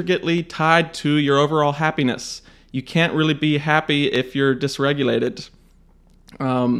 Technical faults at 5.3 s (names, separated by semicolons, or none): dropped samples